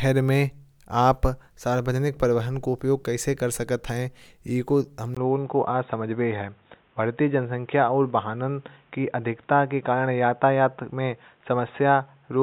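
At 5.15 s the speech turns dull and boxy and stays that way to the end, after a short silence of about 20 ms at the change. Nothing above 3.8 kHz remains, a new background noise sits roughly 40 dB below the speech, and the level stays about the same. This is likely an input switched to a poorer device. A plain low-pass filter or codec bandwidth drop would narrow the band without the gap and the change in noise.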